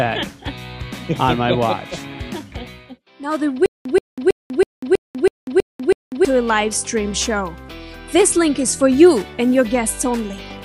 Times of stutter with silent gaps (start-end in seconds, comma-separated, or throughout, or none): 3.66-6.25